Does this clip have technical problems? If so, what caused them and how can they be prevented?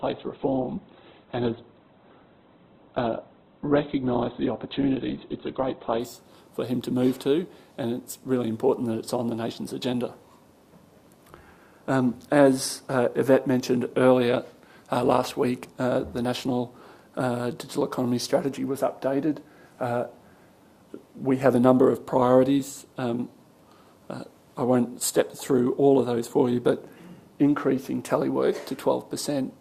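Yes. For the first 6 seconds, from 0.0 to 6.0 s, the sound is dull and thin, with nothing above about 4.2 kHz, and it carries heavier codec artefacts. At 6.0 s it turns suddenly fuller and clearer, with no gap. This is an adaptive stream starting at a low bitrate. The player opened on a version that sounds like about 12 kbit/s Opus so it could begin quickly, then switched to one nearer 64 kbit/s after measuring the connection. It can be prevented by starting on a middle-quality stream or waiting for a brief bandwidth estimate first.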